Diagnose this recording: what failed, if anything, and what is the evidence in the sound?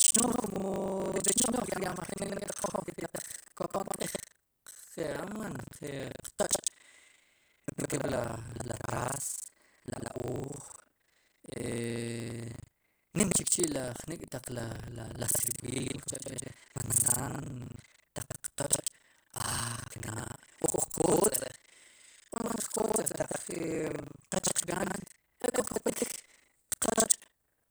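Buffer tearing at the driver stage. A 25 Hz rattle follows the speech throughout. About two fifths of each buffer replays audio roughly 100 ms old.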